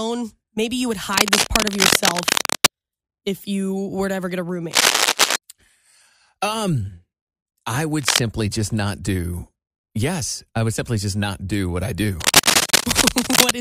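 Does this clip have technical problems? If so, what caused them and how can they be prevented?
Yes. Four bursts of cable scratch noise sit over the speech, each roughly 5 dB above it. They run from 1.13 to 2.67 s, between "you would" and "if you were to", and from 4.71 to 5.36 s. A short one runs from 8.01 to 8.19 s, just before "just not do", and the last from 12.20 to 13.51 s, after "not do what I". Each is a dense, uneven scratching. The likely cause is a worn cable or connector whose contact resistance jumped as it moved. Replacing worn leads and keeping cables still while recording prevents it.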